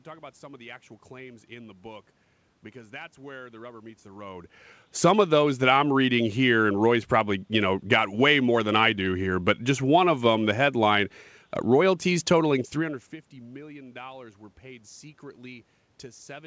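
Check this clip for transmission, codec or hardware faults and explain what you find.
No transmission, codec or hardware faults: the room noise and the level changes around 4 s and 12.5 s, where the talker moves relative to the microphone, belong to the recording, and the band ending at 8 kHz fits a G.722 call path at 64 kbps.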